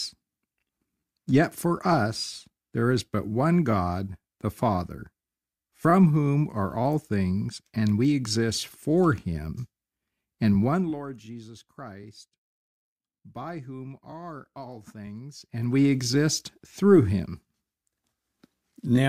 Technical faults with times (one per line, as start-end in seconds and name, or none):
10.63-11.03 zipper noise
15.39-15.80 zipper noise